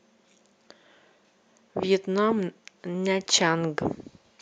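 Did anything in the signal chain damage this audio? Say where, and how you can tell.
No, nothing in the signal chain damaged this speech recording. There is no point in the clip where the sound is disturbed by any stage it passed through.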